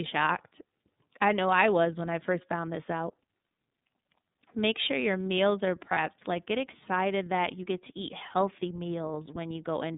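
From start to finish the speech runs through the iLBC codec, and the damage is plainly audible. The line band sits at roughly 150 Hz to 3.7 kHz, so there's no air above that and a thin low end. The encoder handles each 30 ms block on its own, which fits the 13.33 kbps mode, and it gives the voice that slightly gritty, synthetic edge: intelligible, but clearly squeezed.

Then, from 5.93 to 5.98 s, just after "sure your meals are", there's a lost iLBC frame, a dropout about one 30 ms frame long. The decoder fills the hole by repeating the last pitch cycle with some noise mixed in, so you hear a brief held, faintly buzzy vowel instead of the real sound. Since each iLBC frame is self-contained, the voice snaps straight back to normal on the next one.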